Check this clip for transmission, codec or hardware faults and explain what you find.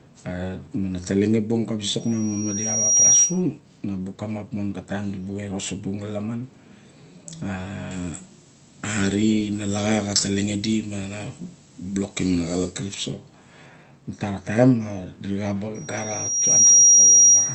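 Two kinds of fault appear in this speech, which comes through a call path whose Opus coding limits the band to about 8 kHz.

Loudspeaker feedback squeal, 2.00 to 3.42 s and again 15.74 to 17.54 s: the microphone re-amplifies its own loudspeaker, so a 5.7 kHz tone swells over about a second to roughly 10 dB above the speech.

Pre-emphasis left on, 7.91 to 12.94 s: the treble boost was never undone, leaving highs about 13 dB too strong at 10 kHz, consistent with a 75 µs FM curve. The speech sounds thin, bright and sibilant.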